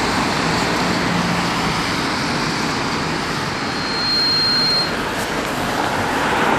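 From the start, the audio sounds dull, with a gurgling, granular grit. The top end flickers in and out. This is likely MP2 compression at a low bitrate, plausibly around 80 kbps. Too few bits reach the upper sub-bands, so they switch off, and what remains is coarsely quantised.

At 3.54 s a loudspeaker feedback squeal begins. A single tone at 4.2 kHz swells over a little under a second. It settles a few decibels above the rest of the sound. A microphone is picking up its own loudspeaker, and the loop gain at that frequency exceeds one. The squeal stops at 5.06 s.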